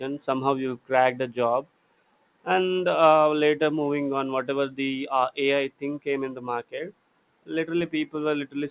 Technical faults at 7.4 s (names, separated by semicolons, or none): none